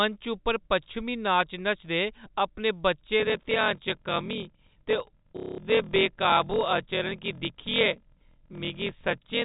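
A speech recording carried over a G.711 telephone path, which limits it to below 4 kHz, develops a block size mismatch (padded) from 3.18 s to the end, just after "पच्छमीं नाच नचदे अपने". Each processing block comes through short, with a silent stretch filling the remainder, so a steady buzz at 41.7 Hz rides under everything and the talk runs at 0.889 times normal speed. That points to 1024-sample blocks being read as larger ones of about 1152 samples. Unlike a resampling or clock error, the timbre stays put even though the pace slows, and the buzz holds steady regardless of what is being said. Inside that stretch, from 5.37 to 5.58 s, there is packet loss with the last packet repeated. About 210 ms of audio is missing and filled by looping the final received fragment. The run turns into a brief robotic stutter, which fits seven lost packets of about 30 ms each. Unlike the padding buzz, it is confined to that short burst and repeats the previous sound instead of inserting silence.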